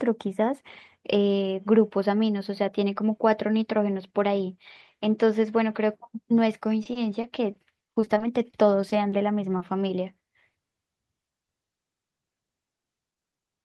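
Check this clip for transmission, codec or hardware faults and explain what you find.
Two packet-loss faults occur in this speech, which comes through an Opus call path whose top end stops at about 12 kHz.

From 6.83 to 9.14 s there is repeated packet loss, giving a robotic sound. A dozen or so short gaps, none longer than 30 ms, were filled by extending the previous sound. The result is choppy, robotic speech with pieces missing.

From 9.58 to 9.62 s there is short concealed packet loss. About 20 ms never arrived in time and was patched from the preceding sound, leaving a brief smear or wobble.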